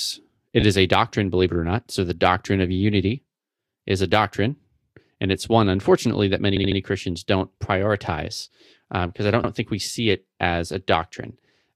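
Repeated frames occur at 0.60 s, before "is a doctrine believe", where a 25 ms block plays twice more; at 6.55 to 6.78 s, after "one unfortunately that many", where a 65 ms block returns three extra times; and at 9.43 to 9.50 s, between "prioritize because um I" and "think we see it", where a 62 ms block repeats once. Each time, a stretch of compressed audio was resent to the decoder, so the same fragment replays as a stutter. The three repeats add about 0.33 s in total.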